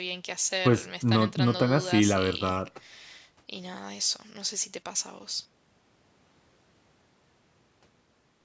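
Nothing stood out on listening to this speech, and the call microphone processing, with its trimmed lowest bass and nothing above 8 kHz, sounds as expected for that path.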